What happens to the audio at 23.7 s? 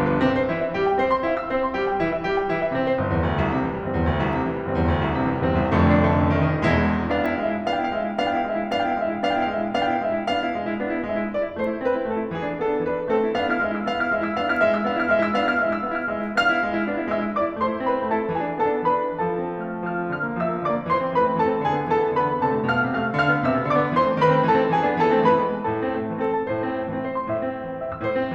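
Nothing goes wrong at 23.7 s: the music carries on intact through that moment, with no dropout, click, distortion or other fault.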